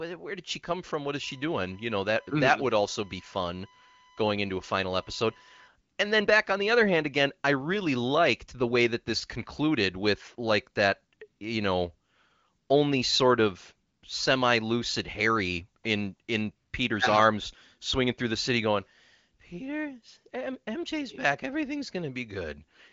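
USB whine runs from 1.23 s to 5.68 s: a steady, fixed-pitch tone at 1 kHz sits under the speech, roughly 30 dB below it. The USB bus pulls current in 1 ms frames, and that periodic draw has leaked into the audio path through the shared power or ground, turning the frame rate into an audible whistle. Beneath it, the speech carries the band limit of AMR wideband (HD Voice) coding, with nothing above 7.5 kHz, and its clarity points to one of the higher bitrates.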